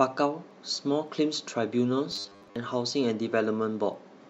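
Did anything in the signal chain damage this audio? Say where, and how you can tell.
Yes. At the converter or digital-link stage, word clock ticks run from 0.51 to 3.94 s, about seven sharp clicks roughly every half second. Two unlocked clocks drifting by roughly 40 ppm slip a single sample each time. A spectrogram shows thin, evenly spaced vertical broadband lines.

From 2.12 to 2.56 s the speech turns into a rigid metallic buzz at 100 Hz. This robotic sound is likely from repeated short buffers in the driver or buffer stage, with a 10 ms block looping while most of the real audio is skipped. The spectrogram shows a comb of 100 Hz harmonics, and the waveform shows identical repeating segments.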